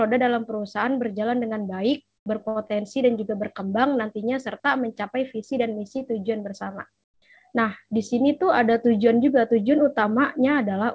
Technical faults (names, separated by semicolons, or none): comfort noise in place of the background